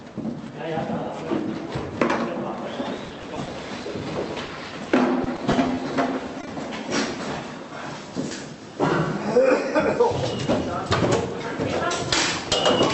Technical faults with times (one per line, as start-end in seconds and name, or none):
2.97-3.86 repeated packet loss (robotic sound)
4.46-4.50 short concealed packet loss
5.24-5.79 repeated packet loss (robotic sound)
6.41-6.49 short concealed packet loss